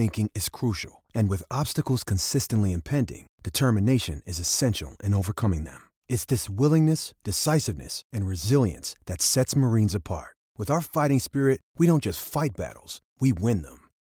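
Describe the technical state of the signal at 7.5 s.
At 7.5 s the speech signal is intact, with no dropout, clipping, glitch or other fault audible at that moment.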